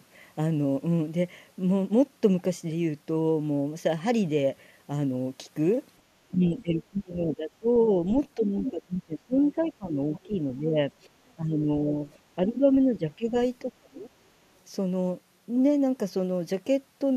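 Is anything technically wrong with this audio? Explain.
Yes, two connected faults.

Speech suppressed in double talk: from 6.31 to 7.67 s, 8.36 to 10.85 s, 11.36 to 11.97 s, 12.46 to 13.34 s and 13.65 to 14.11 s, the speech dips by roughly 10 to 30 dB. The deepest cut, from 13.65 to 14.11 s, nearly silences it. This is likely an echo canceller that heard both sides talking at once and turned the talker down with the echo.

Other side's voice leaking through: brief scraps of a second voice appear at 8.64 to 8.71 s, 9.49 to 9.66 s and 10.16 to 10.20 s. The first is nearly as loud as the speech, and the later two are faint, well underneath it. The likely cause is the same echo canceller letting loudspeaker sound reach the microphone.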